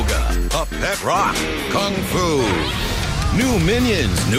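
No technical faults can be heard anywhere here.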